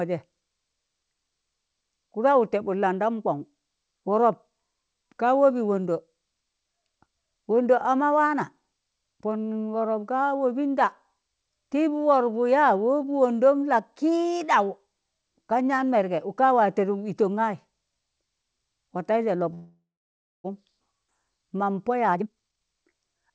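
At 19.54 s the speech stops and a brief buzzy continuation of the last sound fades out, leaving about 0.6 s of silence before the talk resumes at 20.46 s. That call audio freeze, likely from packets held up so the jitter buffer ran dry, adds roughly 0.9 s of delay while losing nothing.

Shortly after, between 21.08 and 21.10 s, there's a skip ahead: about 0.3 s of speech is simply gone, and the two sides are butted together with almost no gap. It sounds like a sudden jump rather than a dropout, because later audio was already queued.

From 21.90 s to 23.31 s a jitter buffer speed-up kicks in, where the receiver trims tiny pitch-period slices over and over to shed around 0.4 s of built-up delay. The speech runs at about 129% speed but keeps its pitch, so it comes across as hurried rather than chipmunky. Throughout, the call path band-limits everything to nothing above 8 kHz, which fits a wideband call codec.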